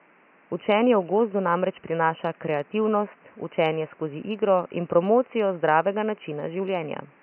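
Nothing in this speech clip points to a technical fault, just a faint bit of room noise sitting about 34 dB under the talking, which belongs to the recording space rather than the system.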